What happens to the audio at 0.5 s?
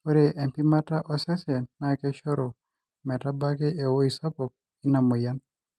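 Nothing goes wrong at 0.5 s: the speech there comes through intact, carried by the call path's Opus coding as it is throughout, with no dropout, glitch or distortion at that moment.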